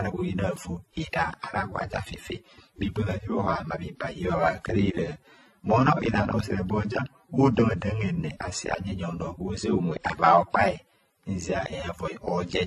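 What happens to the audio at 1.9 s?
The audio was likely transcoded between lossy codecs, pointing to AAC then WMA, throughout the clip, so at 1.9 s the artefacts of both codecs are heard together and nothing survives above 12.7 kHz.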